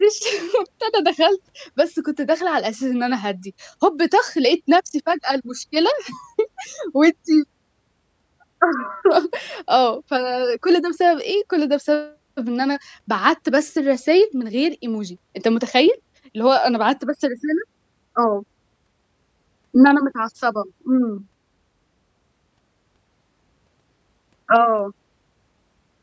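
No technical faults can be heard in this recording.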